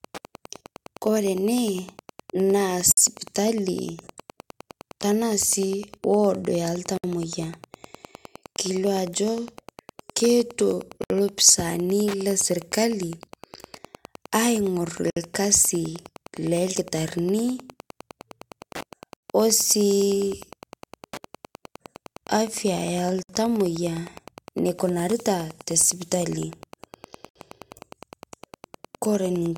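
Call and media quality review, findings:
Wi-Fi interference, whole clip: ticking about ten per second, roughly 25 dB below speech. A nearby radio's 102.4 ms beacon is being rectified in the audio circuit. Spectrogram: evenly spaced vertical broadband lines.

Gap at a join of encoded pieces at 2.92, 6.97, 11.04, 15.10, 19.17, 23.23 and 27.29 s, every 4 s. First gap 55 ms, the rest 64 ms. Each encoder run's start delay and end-frame padding were left in. Waveform: flat dropouts with smeared edges.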